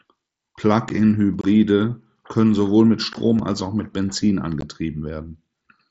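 A block of digital silence at 0.89 s drops the speech out for 10 ms with no fade, short enough to be heard as a tick or dip. The output buffer was likely not filled in time, so the missing samples were written as zeros.

Unconcealed Bluetooth headset packet loss follows from 1.41 to 1.44 s, a 22.5 ms hole that fits about three lost packets of 7.5 ms each. Silence or an idle pattern replaced the headset's voice packets with nothing to smooth the join, so the speech chops off and resumes abruptly. The same fault returns at 3.13 s as a shorter 15 ms gap.

A second block of digital silence at 3.39 s lasts only 5 ms and is heard as a small click.

The packet loss appears once more at 4.61 s, another 15 ms abrupt hole in the wideband mSBC headset audio.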